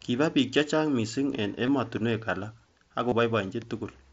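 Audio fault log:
1.66 s and 3.09–3.12 s, concealed Bluetooth headset packet loss: a brief buzzy, held tone at 1.66 s, then a short buzzy, held tone with a slight warble at 3.09 s. About 15 ms and 30 ms of headset-to-phone packets went missing, and the phone patched each gap by repeating a closely matching stretch of the preceding waveform.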